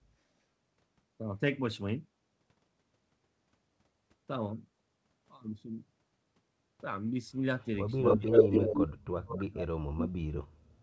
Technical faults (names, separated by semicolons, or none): echo leak; speech suppressed in double talk